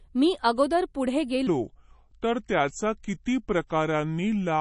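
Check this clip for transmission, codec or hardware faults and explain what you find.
Two faults are audible: compression damage throughout and a slowed section from 1.47 s to the end.

MP3 compression: from start to finish the speech sounds watery and swirly, and sibilants turn metallic and chirpy. The likely cause is an MP3 encoder short of bits, consistent with a low bitrate around 40 kbps. It cuts the treble at a fixed frequency and zeroes weak frequency lines that flicker frame to frame.

Section at the wrong speed: right after "अगोदर पुढे", at 1.47 s, the speech suddenly turns deep and sluggish and stays that way to the end. It runs at 0.755 times normal speed, so pitch falls by roughly five semitones along with tempo, likely from playback against the wrong clock.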